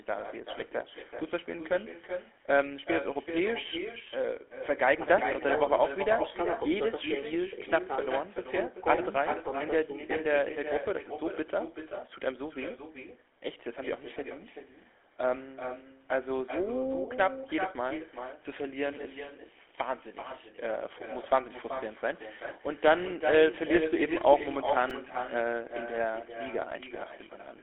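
From the start and for the whole clip, the speech carries an echo with no canceller. A quieter, thinner copy of each phrase returns roughly 400 ms later, about 8 dB below the speech. The far end's loudspeaker feeds its microphone, and nothing removes it.

The whole clip also has GSM full-rate codec damage, and it is plainly audible. The speech sounds buzzy and gravelly. The codec rebuilds the voice from a coarse pulse excitation, which fits a 13 kbps stream. Nothing is heard above 3.8 kHz, within a 300 Hz to 3.5 kHz line band.

At 24.90 s there is a repeated buffer. A tiny slice of sound plays four extra times, with hard joins. It comes out as a click or brief buzz rather than a stutter. That fits a 128-sample buffer, about 2.7 ms each, so roughly 10 ms of new audio is lost.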